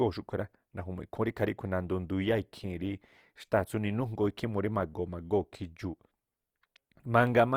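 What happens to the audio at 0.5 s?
At 0.5 s the speech carries plainly audible Opus compression, present across the whole clip rather than at that moment alone. The sound is grainy and rough, with noisy texture where clean detail should be, which is likely from the encoder's music (CELT) mode running short of bits, at a level that fits roughly 24 kbps. It keeps band energy by filling gaps with folded or noise content, so unlike MP3 it leaves few hollow spectral holes and swirls less, and the full bandwidth still reaches about 20.1 kHz.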